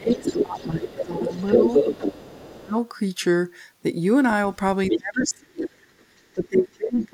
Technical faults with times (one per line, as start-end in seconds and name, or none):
0.00-1.60 speech suppressed in double talk
0.12-2.58 other side's voice leaking through
2.23-2.76 speech suppressed in double talk
4.90-5.29 other side's voice leaking through
4.91-5.73 speech suppressed in double talk
5.62-6.04 other side's voice leaking through
6.35-7.14 speech suppressed in double talk
6.75-7.03 other side's voice leaking through